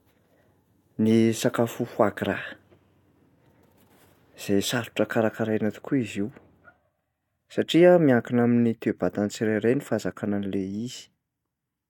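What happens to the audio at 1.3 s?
Nothing goes wrong at 1.3 s: the speech runs on intact through that moment with no dropout, click or distortion.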